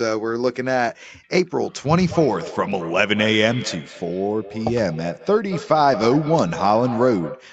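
Feedback echo between two devices runs from 1.96 s to the end of the speech. Two devices in the same room share the call, so one speaker replays what the other's microphone sent, and that microphone captures it again. Each device's echo canceller removes only its own playback, so this loop escapes. Every phrase returns roughly a fifth of a second later, thinner and ringing, peaking about 13 dB below the speech, through a call path that tops out at 8 kHz.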